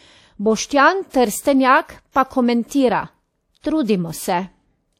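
A short hiss smears ahead of sharp attacks at 2.11, 2.68 and 3.60 s, lasting 34 to 41 ms. This is pre-echo: block-wide quantisation noise filling the quiet before each attack.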